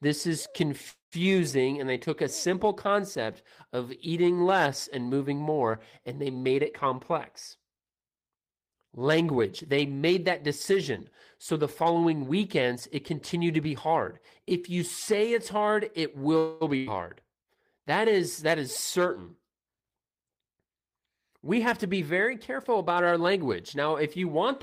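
Call audio freeze at 0.89 to 1.24 s: the sound stretches into a fading buzz or hiss, then drops to about 120 ms of silence before resuming exactly where it stopped, so a delay of about 225 ms is inserted but nothing is lost. The likely cause is packets held up in transit, emptying the jitter buffer.

Jitter buffer speed-up at 6.37 to 7.01 s, right after "moving more and they": the speech runs at 112% speed with unchanged pitch. The receiver trims pitch-period slices, roughly a tenth of a second in total, to reduce a built-up backlog, which makes the speech sound hurried.

Jitter buffer speed-up at 11.52 to 13.60 s, between "made that decision" and "be hard": a gentler 106% rush that drops roughly 150 ms.

Call audio freeze at 16.38 to 16.63 s: another held, fading buzz or hiss of about 225 ms, this time with no silence, after which the speech continues intact.

Burst of packet loss at 16.77 to 16.89 s: about 100 ms of audio is lost. 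The receiver extends the last sound and turns it down, and the speech resumes further on with that stretch missing.

Jitter buffer speed-up at 19.44 to 19.99 s, just after "is that is certain": the speech runs at 113% speed with roughly 70 ms cut.

Jitter buffer speed-up at 21.57 to 23.77 s: the speech runs at 106% speed, trimming roughly 150 ms.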